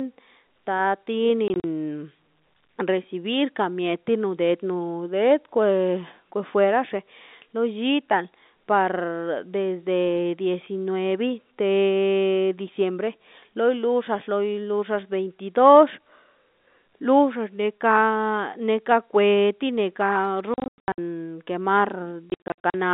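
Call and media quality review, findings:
Packet loss filled with silence: speech chopped by hard-edged dropouts. 1.48–1.64 s, about 80 ms missing in short gaps, longest 40 ms. 20.54–20.98 s, about 320 ms lost, longest hole 100 ms. 22.3–22.74 s, about 280 ms lost, longest 60 ms. Gap lengths fit 20 ms packets. Receiver jitter buffer/loss handling inserting silence instead of concealment. Band-limited G.711 telephone coding around the gaps.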